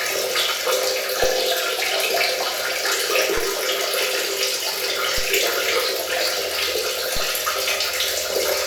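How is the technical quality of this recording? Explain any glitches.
The recording has two DC steps. At 1.24 s the waveform's zero line suddenly shifts by about -20 dBFS and holds until 3.37 s, when it drops back. A second shift of about -18 dBFS runs from 5.18 s to 7.17 s. Each jump is an abrupt offset change, like a converter recalibrating or an offset input switching in. Every edge is heard as a low thump or click. The sound itself carries on unchanged.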